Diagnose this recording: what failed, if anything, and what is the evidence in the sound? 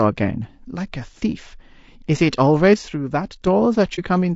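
Low-delay AAC compression, throughout the speech: the voice sounds plainly rough and grainy, with noise filling the gaps between harmonics and a thin, synthetic top band. This is likely codec damage from an AAC-ELD encoder at a rate around 32 kbps.

One channel drops out from 2.74 to 3.47 s: the level falls abruptly by about 6 dB and recovers at the end. The likely cause is one stereo channel going silent in the playback or transport chain, so the mono sum keeps only half the shared signal.

AAC frame loss with muting from 3.95 to 3.99 s: a short hole of about 30 ms fades out and back in with soft edges. The decoder zeroed a missing network frame, which fits a single lost frame, and the overlapping windows smoothed the boundaries.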